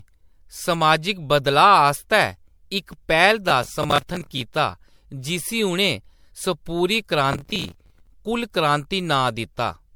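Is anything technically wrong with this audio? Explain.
Yes, there are two problems. Generation loss runs through the whole speech clip. It sounds swirly, smeared and hollow, and consonant attacks blur. The likely cause is repeated MP3 re-encoding, perhaps around seven passes at 96 kbit/s. Each pass adds fresh quantisation noise and spectral holes. Nothing remains above 19.9 kHz.

Processor overload crackle appears twice, from 3.50 to 4.41 s and from 7.33 to 8.07 s. Gritty tearing rides on the speech, then stops. Audio buffers missed their deadlines in quick succession, and stale audio filled each gap. The short hard-edged repeats fit buffers of around 10 ms.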